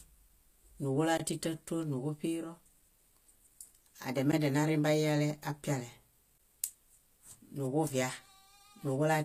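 Throughout the speech, the treble sounds synthetic: s sounds come out gritty and lispy, and nothing reaches above 14.9 kHz. This is likely HE-AAC compression at a low bitrate, around 24 kbps, rebuilding the highs from copied lower bands. A plain low-pass would sound dull rather than metallic.

A block of digital silence cuts in from 1.18 to 1.20 s (20 ms), and shorter 15 ms blocks follow at 4.32 s and 6.38 s. Samples drop to silence with no fade, so each gap is a short hole, unlike a single-sample tick.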